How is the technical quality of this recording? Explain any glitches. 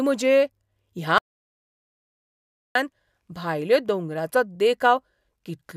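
The recording has one clear glitch: an audio dropout to silence. At 1.18 s the speech cuts off mid-flow. Nothing returns until 2.75 s, so about 1.57 s is lost. The gap is dead digital silence, with no room tone or hiss. That points to the input signal being lost while recording continued and wrote silence. A disconnected device, failed link or accidental mute is the likely cause. Whatever was said in that stretch cannot be recovered.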